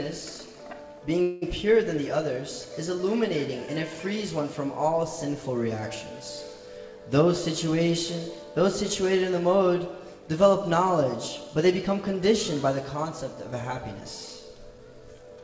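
At 1.22 to 1.44 s a call audio freeze holds the last sound as a fading buzz for about 0.2 s, likely from delayed packets draining the jitter buffer; afterward the audio resumes intact. From 13.99 s to the end, a jitter buffer speed-up trims short pitch-period slices to shed about a fifth of a second, so the audio runs at 113% speed, hurried but unchanged in pitch.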